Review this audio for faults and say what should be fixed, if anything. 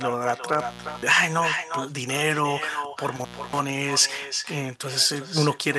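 Throughout, every phrase is shadowed by a thinner copy about 7 dB down and about 0.4 s late. This is echo with no canceller: the far end's loudspeaker feeds its microphone. Enable echo cancellation or use a headset at the far end.

From 0.53 to 1.11 s and 3.16 to 3.60 s, crackle brackets dropouts of 414 ms and 285 ms. That points to an intermittent contact in a loose cable or plug. Reseat or replace the suspect connector.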